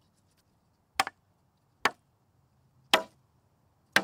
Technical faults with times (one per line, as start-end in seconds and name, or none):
2.97-3.02 repeated frames